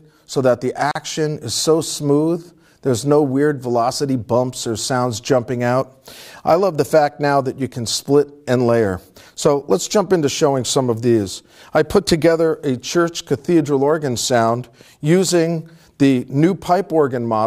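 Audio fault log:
0.91–0.95 s, gap at a join of encoded pieces: two separately encoded stretches of audio were spliced together without removing the encoder's start-up delay and the padding on the final frame, so that padding survives as dead air at the seam. The result is a silence of about 41 ms cutting into continuous sound, with sudden edges softened by the codec, after which the sound resumes exactly where it broke off.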